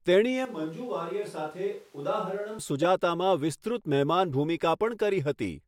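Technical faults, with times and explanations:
0.45–2.59 s, switch to a distant microphone: the speech turns hollow and roomy, about 10 dB quieter with less bass, likely because the close microphone dropped out. The waveform steps down abruptly, and the spectrogram loses low end and shows room noise about 30 dB below the speech.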